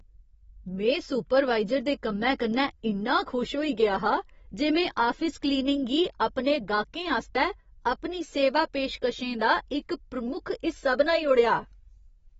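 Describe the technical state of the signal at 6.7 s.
Throughout the clip, 6.7 s included, nothing sounds above 7.6 kHz and sibilants warble and fizz from coarse spectral quantisation, which a plain low-pass filter wouldn't cause. The likely cause is AAC compression.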